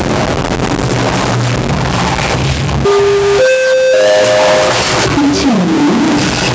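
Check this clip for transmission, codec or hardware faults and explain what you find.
Two faults run through the whole clip: a stuck bit and gain pumping. The band stops at about 8 kHz, consistent with call microphone processing.

Stuck bit: a data line or converter bit is likely held at a fixed value, so roughly half the samples are pushed off by that bit's weight. Throughout, the sound carries added distortion, and the quieter stretches fill with a gritty noise floor instead of falling silent.

Gain pumping: the input gain is likely too high, so a fast limiter keeps pulling the level down whenever something loud arrives. The level swings by about 5 dB, leaving the clip squashed and uneven in its breathing.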